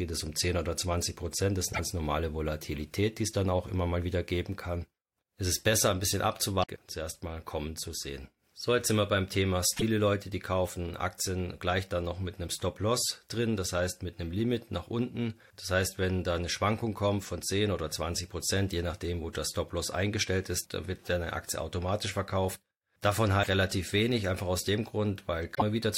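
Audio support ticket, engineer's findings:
Damaged data in compressed stream: brief glitches at 1.69–1.79, 6.60–6.69 (after "ist besser ein bisschen"), 9.73–9.83, 23.39–23.48, 25.51–25.62 s. Decoder loses frame sync and resyncs. Spectrogram shows broadband vertical smears; waveform shows abrupt discontinuities.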